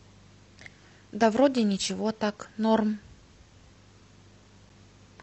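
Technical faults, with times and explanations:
4.69 s gap between stream segments: a brief, hard-edged 7 ms silence breaks the speech where mismatched segment timestamps leave a hole that the player pads with silence.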